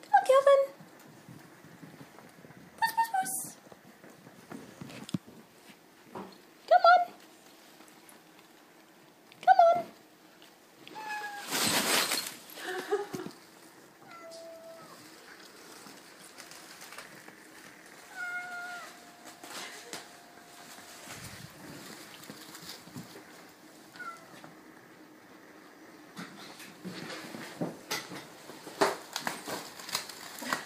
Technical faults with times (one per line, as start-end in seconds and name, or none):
none